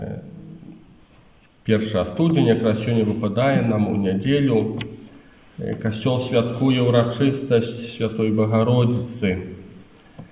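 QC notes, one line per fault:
No faults found.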